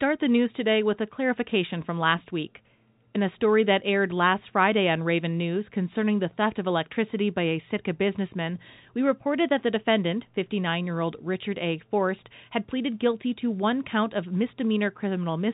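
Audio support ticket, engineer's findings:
Nothing to flag on this speech recording; the narrow band topping out around 4 kHz and the faint level-following hiss fit an ordinary G.711 mu-law telephone channel at 64 kbps.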